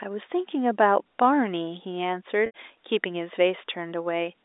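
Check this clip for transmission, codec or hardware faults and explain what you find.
One transmission fault, a short packet loss with pitch repetition around 2.46 to 2.51 s. About 80 ms of audio went missing, which fits four 20 ms packets. The receiver bridged it by repeating the last pitch period and fading that out, so you hear a brief buzzy, held tone before the speech picks up again. The G.711 A-law telephone coding carries it at 64 kbps, with the band running roughly 300 Hz to 3.7 kHz.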